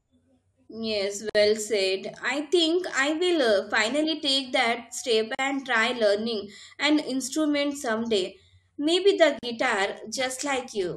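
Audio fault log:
1.30 s, 5.35 s, 9.39 s: gap at a join of encoded pieces. Silences of 54, 40 and 40 ms recur every 4 s, where separately encoded pieces meet with encoder delay and end padding left in. The waveform drops to silence with smeared edges, and the spectrogram shows a narrow vertical blank stripe before the sound resumes where it left off.
9.55–10.96 s: periodic clock jitter. Interference at around 400 Hz wobbles the converter clock, placing sidebands about 400 Hz above and below every component, strongest on high frequencies. The spectrogram shows parallel ghost lines flanking each harmonic, heard as a rough, metallic edge that disappears in pauses.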